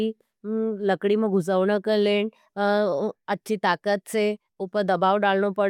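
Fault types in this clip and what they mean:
No technical faults can be heard in this speech recording; the signal stays continuous and stable throughout.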